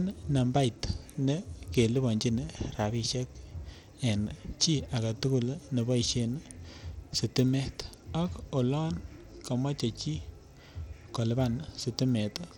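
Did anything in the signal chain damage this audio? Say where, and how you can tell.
Yes, at the codec stage, and the damage runs through the whole speech clip. The treble is thin and flickers in and out while a gritty, grainy noise rides on the sound, which points to Bluetooth SBC compression at a low bitrate, likely around 96 kbps. Starved of bits, the upper sub-bands drop out or flutter and the rest are coarsely quantised. A spectrogram would show patchy, blocky gaps across the top bands and noisy smearing below them.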